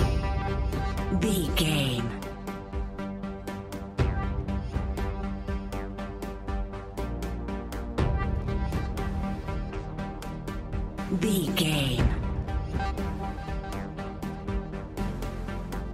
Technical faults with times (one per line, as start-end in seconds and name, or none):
none